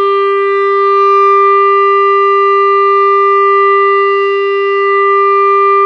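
Nothing in this recording of sounds stands out as a technical fault; it just runs along as captured, with no drops, glitches or interruptions to point to.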